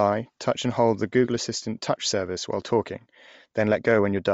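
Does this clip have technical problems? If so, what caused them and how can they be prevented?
Yes. Throughout the clip, the speech was likely squeezed through Bluetooth LC3 compression at a low bitrate. The encoder keeps too few bits for the upper spectrum, zeroes much of it and fills the gaps with synthetic noise, so consonants and the top of the voice take on a breathy, grainy edge that is plainly audible. The texture points to something near 32 kbps with short 7.5 ms frames. Running the LE Audio link at a higher LC3 bitrate prevents this.

From 1.62 to 1.65 s, lost LE Audio frames interrupt the speech for about 22.5 ms, a gap that fits three consecutive 7.5 ms frames going missing over the radio link. The decoder covered the hole by replaying the last spectrum with randomised signs, so the gap is filled with a brief noise-like substitute instead of dropping to silence or clicking. Keeping the devices close, away from Wi-Fi congestion, with retransmissions enabled, prevents these dropouts.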